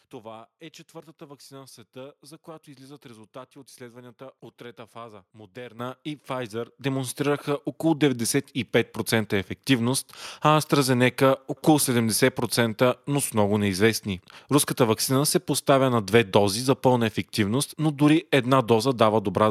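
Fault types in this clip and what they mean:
Clock drift buffer slips: A click recurs every 0.91 s from 0.84 s to 19.09 s, about twenty in all. Its steady spacing, unrelated to the speech, points to the likely cause: two unsynchronised clocks about 200 ppm apart, each slip dropping or repeating a handful of samples.
Microphone volume stepped up: The input level jumps abruptly at 5.79 s by about 10 dB, then again at 6.81 s by about 8 dB. Voice and background noise rise together and stay up, so this is a device gain change rather than the talker getting louder.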